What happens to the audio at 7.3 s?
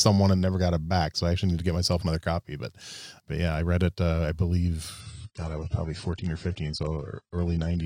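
At 7.3 s the speech is inside a stretch of adaptive stream at a lower bitrate, running from 5.00 s to the end. The player abruptly switched to a leaner encode, which fits a fall to roughly 24 kbit/s. Treble vanishes above 9.3 kHz and codec artefacts thicken, with no gap.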